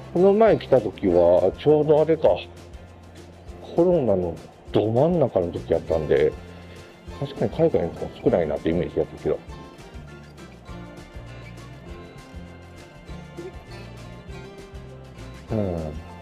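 No technical fault can be heard anywhere in the clip. The sound runs without any break, jump or added disturbance.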